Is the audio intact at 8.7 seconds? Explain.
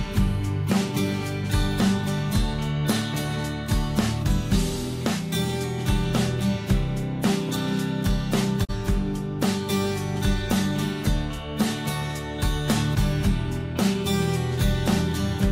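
No. At 8.64 to 8.71 s there is a digital broadcast dropout: the receiver failed to get a usable frame, whether the signal was lost or the frame failed its checksum, so it muted output until good frames resumed. The sound fades out over 20 ms into a silent hole, and about 32 ms of programme is missing, which points to a single lost frame. The audio then returns, but what was broadcast during that gap is gone.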